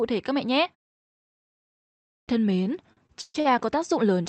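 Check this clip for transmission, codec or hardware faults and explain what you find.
Two transmission faults stand out in this speech clip, heard through a call path whose content stops at 8 kHz, consistent with an Opus-style codec.

Clipped start after a pause, at 1.99 to 2.28 s: after about 1.3 s of silence, the output device was still waking or relocking, so roughly 0.29 s of the next phrase vanished. Speech bursts in abruptly. A waveform shows a flat line jumping straight into full-level speech with no onset, and a spectrogram shows no attack energy.

Repeated stalls (stutter), from 2.63 to 3.47 s: packets arrived late five times and the jitter buffer ran dry. Each time the receiver stretched the last sound, about 254 ms in total and up to 130 ms at once, so the audio drags and stutters without losing content. A spectrogram shows smeared, repeated frames, and the waveform shows near-copies of cycles, some fading.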